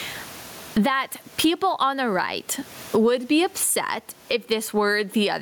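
Speech, and it suffers from gain pumping all the way through, with the gain swinging by something like 20 dB; the room noise sits about 41 dB under the voice. Levels come out squashed, most likely from the mic gain being set way too high with a fast limiter or compressor clamping down on each loud bit.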